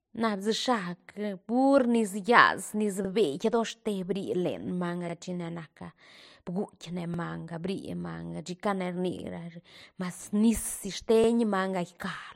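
A short stutter recurs at 3.05, 5.10, 7.14 (just after "bguitk ne"), 9.19 and 11.24 s, each time a brief piece of the speech replaying before it moves on. These are overlapping chunks. The audio was handled in blocks spaced 2 s apart, and each block began about 48 ms before the previous one had finished, so that 48 ms stretch plays twice at every join, producing the regular skip.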